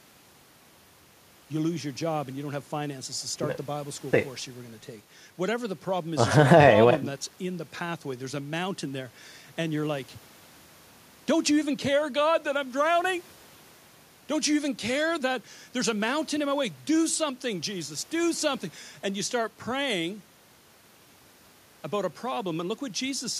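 Nothing stood out as a technical fault on listening to this speech recording.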